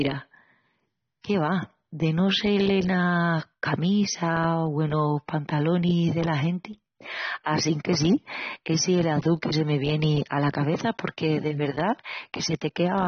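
Speech, carrying AAC compression damage that runs through the whole clip and is plainly audible. Nothing sits above about 6.3 kHz, so the voice sounds dull and closed-in, and sibilants and held vowels have a smeared, warbling texture. On a spectrogram this shows as a hard shelf at 6.3 kHz with patchy gaps in the upper bands. The waveform looks normal. Heavy AAC-LC coding at a low bitrate, around 24 kbps, is the likely cause.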